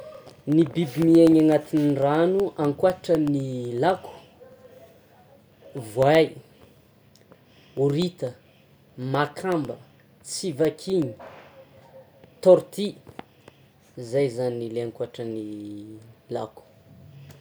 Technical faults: periodic USB or driver dropouts

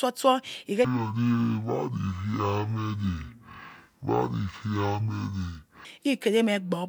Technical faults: stereo read as mono

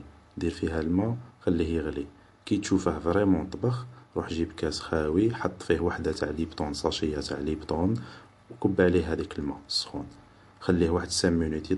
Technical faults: MP3 compression

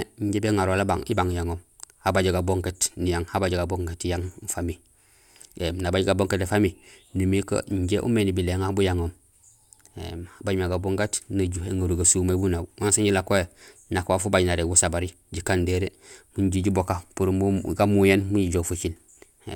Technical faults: none

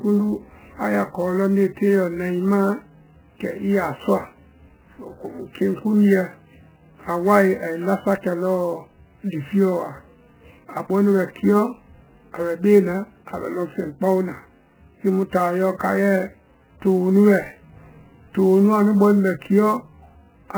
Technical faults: MP3 compression; sample clock jitter

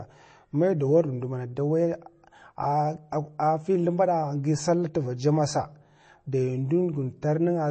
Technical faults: MP3 compression

